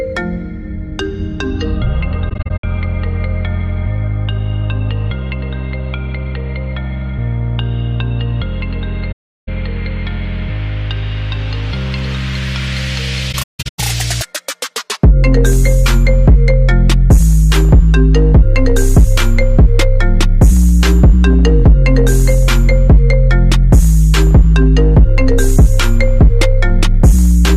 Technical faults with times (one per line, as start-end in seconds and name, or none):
2.29-2.64 AAC frame loss with muting
9.11-9.49 AAC frame loss with muting
13.32-13.79 AAC frame loss with muting